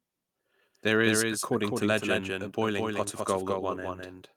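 Speech runs throughout this clip with a second, slightly quieter copy of itself trailing behind by about a fifth of a second, so every syllable lands twice. The echo is dry and full-band, with no decay or room colour, roughly 5 dB below the original. That is a doubled audio track, most likely the same signal captured again through a slower path, or two copies held out of step in an edit and mixed together.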